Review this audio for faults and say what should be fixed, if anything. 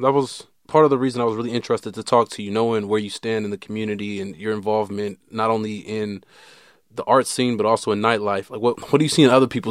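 No faults; nothing to fix.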